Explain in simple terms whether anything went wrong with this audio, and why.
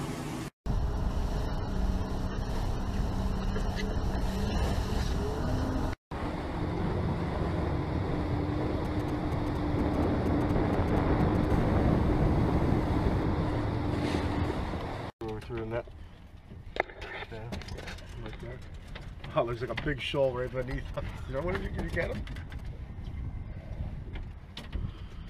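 A 2G mobile phone near the recording gear was sending short groups of radio pulses, which the audio circuit picked up and turned into sound. These GSM signalling bursts, from 8.85 to 11.46 s and again from 19.53 to 22.61 s, come through as a galloping dit-dit-dit of brief buzzes.

Straight after the first burst, a phone in a call was transmitting 217 times a second. From 11.50 to 13.23 s this GSM phone buzz is a steady, harsh, raspy hum at 217 Hz, unrelated to the actual audio.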